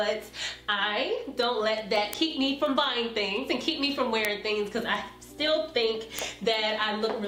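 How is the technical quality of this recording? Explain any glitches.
The recording has a clock problem running nearly the whole way through. From 0.20 s to 7.24 s there's a steady stream of word clock ticks, about five a second and roughly forty in all. The receiving gear is free-running rather than locked to the source, and the spacing suggests the two clocks differ by something like 100 ppm. Each time they slip, a single sample gets dropped or doubled, which you hear as a sharp click of uneven strength.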